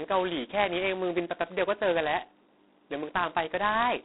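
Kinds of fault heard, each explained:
G.726 ADPCM: The speech was coded as ADPCM, where each sample carries only a few bits describing its difference from an adaptive prediction. The damage is heavy enough to suggest the lowest, 16 kbit/s mode, with very coarse steps. That coarseness leaves a harsh, rasping hiss that rises and falls with the speech level. The line passes only about 250 Hz to 3.7 kHz, and nothing is heard above 3.9 kHz.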